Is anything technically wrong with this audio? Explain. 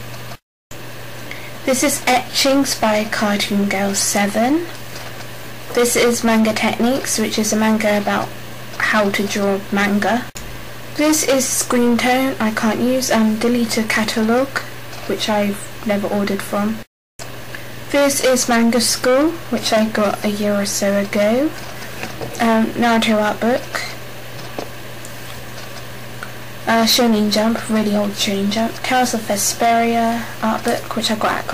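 Yes, there's heavy hard clipping running the whole way through. The signal's pushed about 19 dB past what the stage can pass, so around a tenth of the samples get sliced flat. Those squared-off tops spray high harmonics, giving a harsh fuzz on every loud moment.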